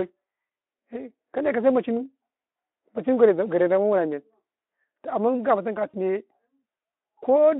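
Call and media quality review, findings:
VoIP packet loss concealed by the speech codec: brief buzzy, smeared dropouts at 0.47–0.49 s (fits one lost 20 ms frame) and 5.90–5.95 s, after "gama tun ka" (fits two). Decoder repeats last pitch/filter with falling gain. Spectrogram: frozen harmonics fading within the Speex 250–3400 Hz band.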